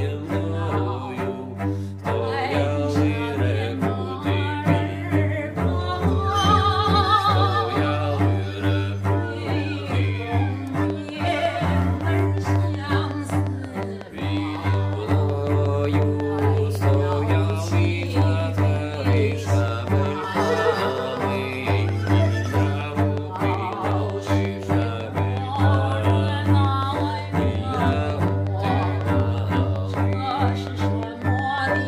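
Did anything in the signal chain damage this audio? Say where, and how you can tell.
Yes. From 10.9 s to 31.8 s a train of clicks, about 5.5 per second and evenly spaced, ticks over the audio, roughly a hundred pulses peaking about 10 dB above it. The likely stage is analogue wiring picking up nearby equipment interference. A spectrogram shows regular thin vertical broadband lines; the waveform shows spikes of much the same shape.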